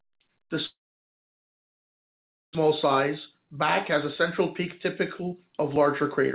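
From 0.66 s to 2.57 s the sound breaks off. The last sound is briefly stretched into a fading buzz or hiss, then the stretch is silent for roughly 1.8 s, and when audio resumes about one second of material is simply gone. This is most likely a long network dropout, with the receiver concealing the gap and then skipping ahead. The band-limited call sound, with nothing above 4 kHz as expected from a G.711 A-law path, runs through the rest of the clip.

Two jitter buffer speed-up passages follow. From 2.65 s to 3.53 s the speech plays about 7% fast, and from 5.02 s to 6.24 s about 13% fast. The pitch stays the same, but delivery sounds hurried. The buffer had built up excess delay, and the receiver cut short pitch-period pieces repeatedly to drain it. Together these cuts remove roughly 70 ms and 150 ms of audio.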